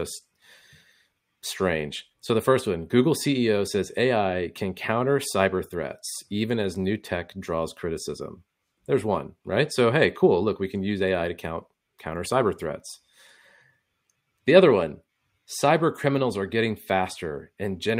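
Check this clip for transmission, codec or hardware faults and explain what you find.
No faults detected in this speech.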